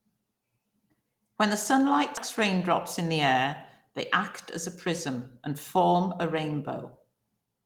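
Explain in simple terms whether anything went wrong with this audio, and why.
A skip ahead happens at 2.17 s, right after "the sunlight". Roughly four-tenths of a second of speech is missing, and playback leaps straight to the later part with no pause or filler in between, so the two sides are stitched together almost seamlessly. This occurs when a chunk of audio is thrown away, lost in transit or dropped because the receiving buffer was overfull while newer sound was already queued.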